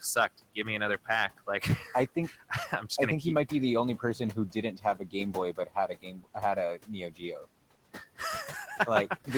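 Throughout the clip, the room noise, which sits about 18 dB below the speech, pumps down between phrases and swells back under them. These are noise suppressor artifacts: the processor pulls the bands it judges to be steady noise down by about 18 dB, frame by frame.

The suppressor also swallows parts of the speech itself. From 0.01 to 0.67 s, just before "me another", a brief sliver fades by up to about 18 dB. From 1.05 to 2.84 s, between "me another" and "just i think keep", roughly half a second sounds faint, dipping about 14 dB. From 3.98 to 6.36 s, after "might be the only", around a second in total drops by up to about 18 dB. From 6.77 to 7.46 s, short fragments sink about 16 dB. In each case this is speech cut by the noise suppressor, which mistook quiet speech energy for background and attenuated it along with the noise.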